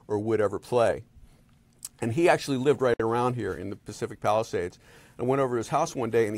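A gap at a join of encoded pieces opens at 2.94 s: about 60 ms of silence, from encoder delay and padding left untrimmed where separately encoded pieces meet, before the sound resumes.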